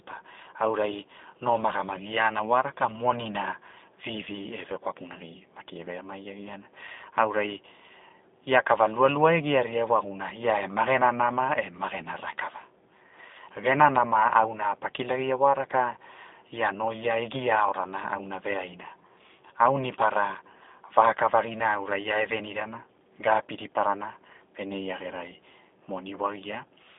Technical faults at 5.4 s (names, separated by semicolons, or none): G.729 codec